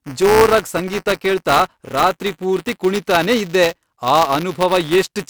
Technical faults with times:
0.00-5.30 buffer tearing

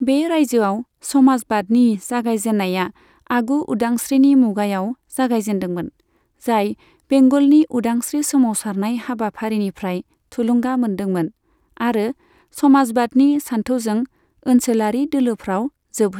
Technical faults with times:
none

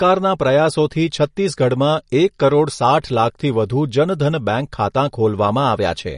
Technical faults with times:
0.00-6.17 MP3 compression

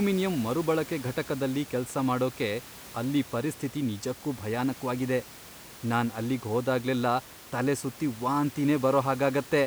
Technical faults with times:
none

